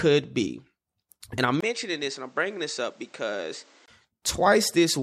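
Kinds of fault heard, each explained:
Input switched to a poorer device: from 1.61 s to 3.88 s the speech turns duller and boxier, drops about 5 dB in level, and loses everything above 8.8 kHz. A new background noise sits roughly 30 dB below the signal, and a 20 ms gap marks the switch. The likely cause is the system changing its input mid-recording to a lower-grade microphone or headset path, with its own narrower band, tone, level and noise, before switching back.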